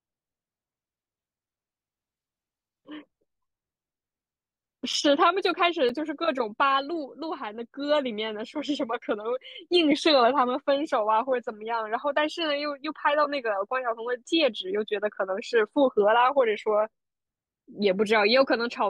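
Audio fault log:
4.93 s and 5.89 s, block of digital silence: the speech cuts out for about 6 ms with no fade, heard as a tick or dip, which fits a 256-sample buffer left unfilled.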